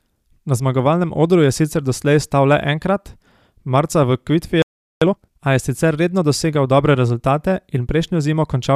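At 4.62 s the speech cuts to silence for about 0.39 s, a playback stall, likely from the player running out of buffered data or its thread being blocked. From 5.02 to 5.40 s, time-compressed catch-up plays the backlog at twice normal speed by cutting and cross-fading short pieces, so speech sounds hurried at unchanged pitch.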